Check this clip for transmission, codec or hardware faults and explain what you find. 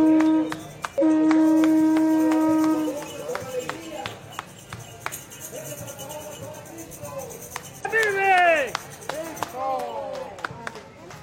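Three brief glitches at 0.98 s, 5.53 s and 7.81 s, each about 50 to 60 ms, are damaged data in a compressed stream: corrupted bytes make the decoder misread frames and lose sync.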